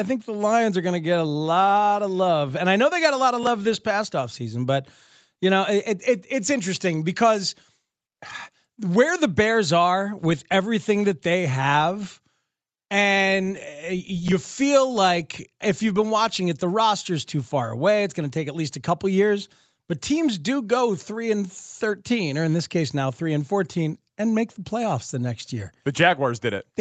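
No technical faults are audible.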